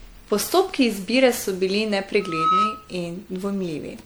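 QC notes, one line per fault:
throughout: generation loss. The speech sounds swirly, smeared and hollow, and consonant attacks are blurred, more than a single 96 kbit/s MP3 would explain. The likely cause is about ten rounds of MP3 decoding and re-encoding, each requantising on a shifted frame grid so noise and spectral holes pile up.
2.2–2.95 s: loudspeaker feedback squeal. A single 1.3 kHz tone swells up over roughly a third of a second and rings at about 5 dB above the speech until it cuts off. A microphone was picking up its own loudspeaker, and at that frequency the loop gain exceeded one, so the tone fed on itself.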